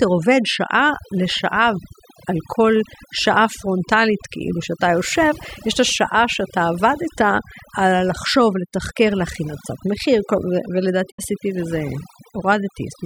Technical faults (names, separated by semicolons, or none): overdone noise removal; digital broadcast dropout